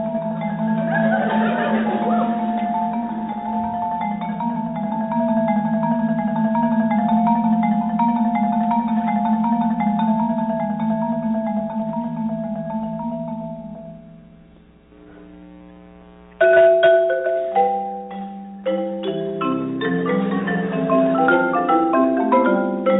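Nothing stood out on listening; the sound carries the narrow, telephone-like band of a call path, with nothing above about 4 kHz.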